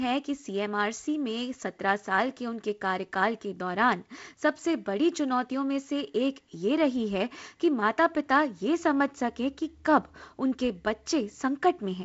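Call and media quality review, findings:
No faults found; speech carried on a G.722 wideband telephone coding path, nothing above 7.7 kHz, light coding damage, consistent with the 48 kbit/s mode.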